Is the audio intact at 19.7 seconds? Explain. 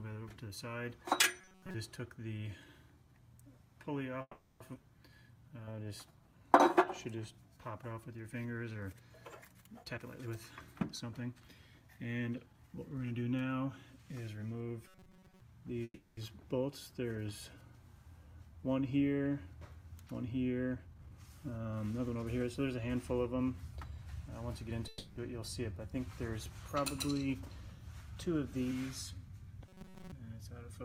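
Yes, at 19.7 s the audio plays through cleanly, with no dropout, click, distortion or other fault to be heard at that moment.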